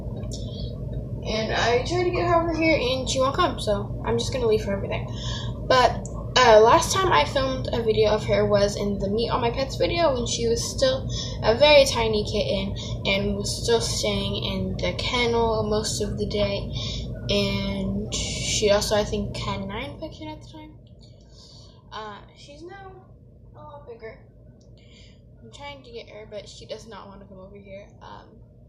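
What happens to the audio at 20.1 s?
A fine ticking, a zipping texture, rides on the audio as its level falls by about 15 dB between 19.26 and 20.78 s. This is zipper noise: the fade moves in unsmoothed 1 dB steps, about ten a second, and each jump clicks.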